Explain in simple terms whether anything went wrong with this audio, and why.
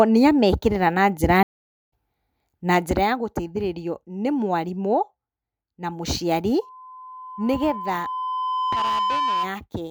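Two things went wrong in this speech clip. The first is a stream reconnect. Right after "nĩamekĩrĩra na njĩra", at 1.43 s, the audio cuts out. It stays silent for about half a second, until 1.91 s. The connection dropped, and the player had to reconnect and start decoding again. When sound returns, it picks up roughly half a second further on. So a short piece of the speech is simply skipped.

The second is zipper noise, from 2.38 s to 3.08 s. Here the volume goes down by a clear amount. But it isn't lowered in one smooth glide. It drops in tiny jumps, about a hundred times a second. Each jump leaves a small click. Together the clicks make a fast ticking or zipping sound on top of the speech while the level falls.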